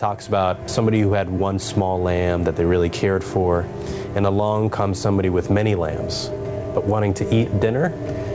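Gain pumping runs through the whole clip: the level breathes up and down by around ten decibels, so loud and soft parts sit squashed together. The likely cause is an input gain set far too high with a fast limiter clamping it. On a waveform the envelope looks flattened, with the noise floor rising between peaks; a spectrogram shows the background brightening in gaps, all beneath an 8 kHz ceiling that fits a G.722 call path.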